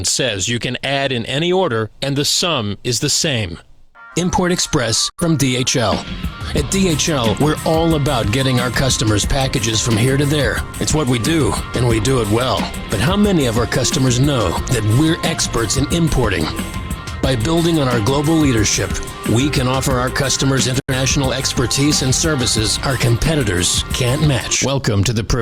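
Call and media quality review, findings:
Digital broadcast dropout at 5.10–5.23 s and 20.80–20.93 s: receiver mute with a 3 ms fade, about 85 ms of programme lost in each gap, which fits two corrupted frames.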